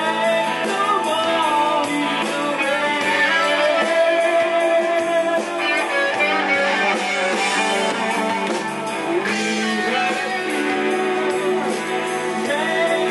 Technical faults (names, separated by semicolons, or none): none